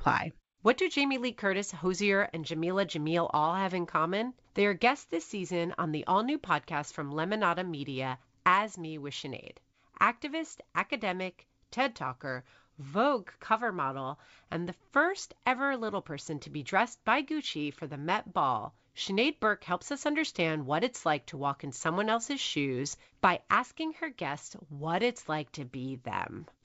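Speech over G.722 wideband coding; nothing technically wrong.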